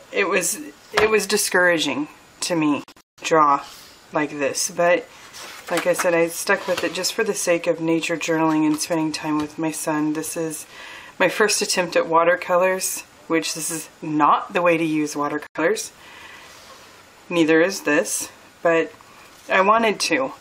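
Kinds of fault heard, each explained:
Digital broadcast dropout: the receiver muted when frames went missing or failed checks, so the sound drops out in holes. From 2.84 to 3.23 s several gaps total 256 ms (longest 171 ms), and 85 ms more vanishes at 15.47 s. Both show as empty vertical bands.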